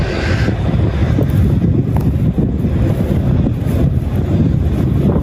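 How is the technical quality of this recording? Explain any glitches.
The recording has one clear fault. Gain pumping runs through the whole clip. The swing is around 10 dB. The likely cause is input gain set far too high, with a fast limiter pulling the level down on every peak. Loud and soft parts sit close together, so the sound feels squashed and breathing.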